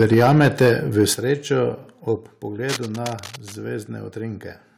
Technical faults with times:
0.00-1.03 microphone overload
0.14 microphone volume stepped down
1.14 microphone volume stepped down
2.16 microphone volume stepped down

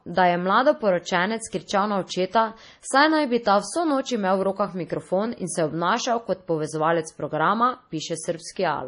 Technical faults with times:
0.00-8.88 MP3 compression

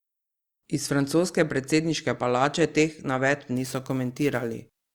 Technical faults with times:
3.56-4.94 sample clock jitter

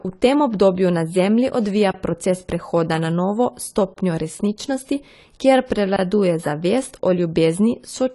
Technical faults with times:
0.00-8.15 AAC compression

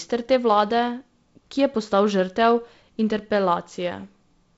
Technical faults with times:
none

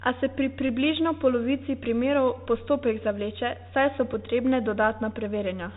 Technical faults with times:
0.00-5.77 Bluetooth CVSD headset codec
0.68 Bluetooth headset packet repeated
4.14 Bluetooth headset packet repeated

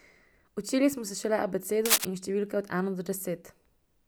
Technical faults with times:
1.85-2.05 cable scratch noise

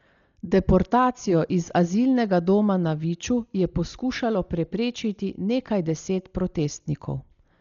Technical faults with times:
0.00-7.60 Dolby Digital compression

